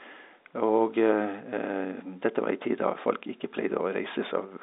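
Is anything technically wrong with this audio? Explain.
No, nothing is technically wrong: the speech comes through the telephone-band coding, which fits 64 kbps G.711 A-law and confines it to roughly 200 Hz to 3.7 kHz, and the room's own background noise sits about 48 dB below the speech.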